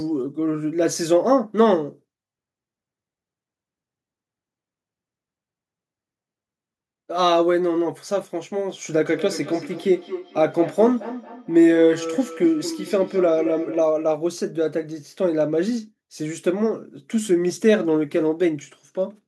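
Speech with a feedback echo between two devices from 9.07 s to 14.0 s. Each phrase returns at a steady interval of roughly 200 ms, with the loudest repeat about 11 dB below the direct speech. The fixed spacing points to two devices in the same room on one call: one plays back the other's microphone feed, that microphone captures it again, and neither echo canceller removes audio played by the other device.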